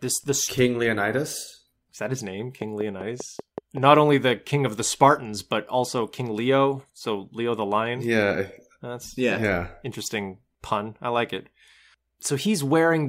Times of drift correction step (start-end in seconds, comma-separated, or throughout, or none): none